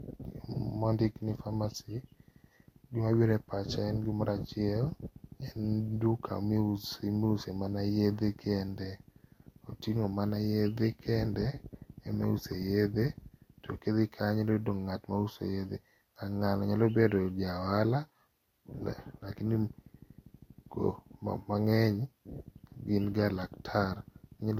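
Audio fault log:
Throughout: low-bitrate audio saved at a high bitrate. The speech has nothing above 16.6 kHz and carries the residue of a heavy earlier encode, likely a Vorbis file near 50 kbit/s later saved as high-rate MP3. The second encoding hides nothing and adds almost nothing.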